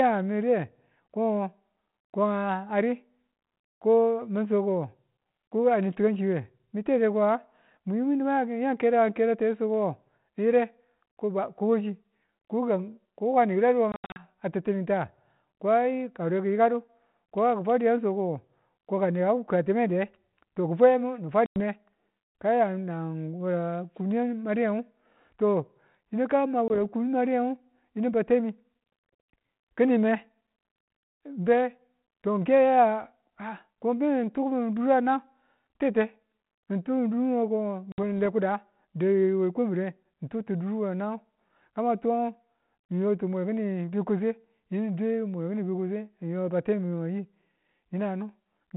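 Packet loss on an ADPCM call cuts hard-edged silences into the speech at 13.92 to 14.26 s (about 180 ms lost in scattered gaps, the longest 80 ms), 21.46 s (100 ms), 26.68 s (20 ms) and 37.92 s (60 ms). Each gap leaves the decoder's predictor and step size out of step with the sender's, so the telephone-band sound, consistent with 32 kbit/s G.726, resumes with brief distortion.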